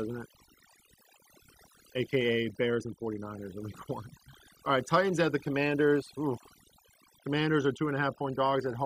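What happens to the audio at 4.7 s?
At 4.65 s there is a very brief blip from damaged data in a compressed stream. Part of the encoded stream is corrupt at that point. The decoder cannot read the affected frame correctly. It loses its place and hunts for the next valid frame header. What reaches the ear is a short synthetic glitch lasting only a few milliseconds.

That moment also carries the overdone noise removal heard across the whole clip. A noise reducer set far too aggressively cuts individual frequency bands whenever they come close to its noise estimate. Soft parts of the speech are pulled down along with the noise. Around 4.65 s the background is lowered and breaks up into twinkling specks.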